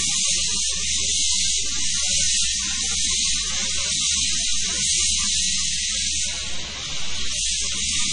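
Throughout, the sound is watery and swirly, with nothing above 10.3 kHz, likely from heavy MP3 compression at a low bitrate, around 32 kbps, dropping weak frequency detail.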